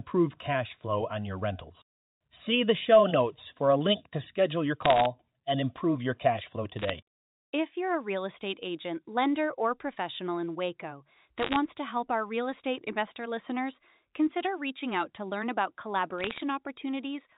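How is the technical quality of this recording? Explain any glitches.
The recording has four short bursts of bit errors on a digital phone line, heard as crackle over band-limited telephone speech. The bursts fall at 4.82–5.06 s (between "link to schedule your" and "and improve your cash"), at 6.79–6.90 s, at 11.38–11.56 s (just before "to help our real") and at 16.18–16.42 s (right after "out to learn about"). During each burst, about one bit in two hundred to 0.7 bits in a hundred arrives flipped on the logarithmically coded line. Every flipped bit corrupts a single sample, and when it lands on a high-order bit, or the sign bit of a loud sample, it produces a sharp tick. Clustered together, these ticks form a brief crackle over speech that stays intact underneath. The G.711 coding itself passes the sound with its 4 kHz band limit.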